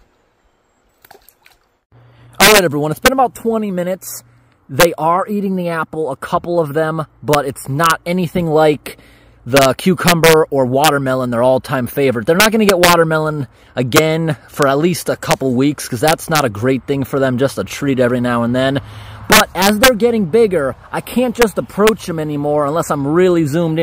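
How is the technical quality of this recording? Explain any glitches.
The recording is marred by a wrap-around fault on its loudest moments.

Integer overflow runs throughout the clip. The signal is driven roughly 8 dB past the largest value the integer format can hold, and instead of being limited, each overshooting sample wraps to the opposite extreme of the range. Only a small fraction of samples, well under one percent, cross that limit, but every one of them jumps across the full scale. The result is violent, sharp cracks on loud peaks, harsher and more abrupt than ordinary clipping.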